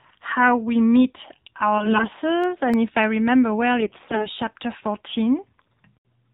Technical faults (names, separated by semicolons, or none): AMR narrowband mobile codec; AMR bit errors; CD scratch ticks